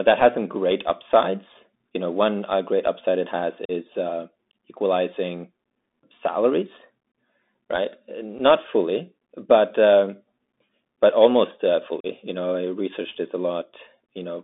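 Throughout the clip, the speech has passed through a Bluetooth CVSD headset codec, the one-bit delta modulator that headsets use for narrowband calls, which fits a 64 kbps link. The line band runs only from about 200 Hz to 3.7 kHz, so the sound is thin and muffled. Because the adaptive step cannot keep up with fast, loud changes, sibilants turn scratchy and a grainy hiss sits under the voice.

Unconcealed Bluetooth headset packet loss also breaks the link three times, as packets between headset and phone go missing and nothing fills the gap. At 3.65 to 3.71 s, after "great upside it has" and before "uh equalizing salaries", about 37.5 ms of audio drops out, a handful of packets, leaving a hard-edged hole. At 8.39 s, just before "fully but um", a single packet's worth, about 7.5 ms, vanishes, leaving a brief hole. At 12.00 to 12.06 s, after "but almost uh", another 37.5 ms gap cuts the speech abruptly.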